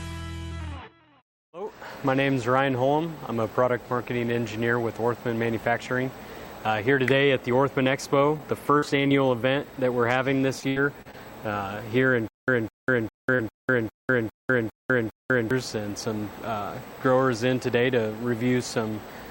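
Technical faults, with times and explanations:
8.37 s, 8.79 s and 9.08 s: short concealed packet loss. About 20, 40 and 20 ms of audio never arrived in time. The receiver continued the preceding sound to cover each hole, then blended back. Each leaves a brief smear or wobble.
10.60 to 11.15 s: repeated packet loss (robotic sound). Four holes fall in half a second, the longest 78 ms. About a quarter of this stretch is patched guesswork. The patches follow each other closely, so the sound turns choppy.
12.28 to 15.51 s: stutter with silent gaps. A fragment of about 0.21 s plays, then about 0.2 s of digital silence follows, eight times at a 0.4 s pace. A stalled player or stream, likely retrying and replaying its last fragment, causes this. The intended audio is lost.
13.35 s: short concealed packet loss. About 40 ms went missing inside the stutter. It was covered by continuing the previous sound, which adds a short smear.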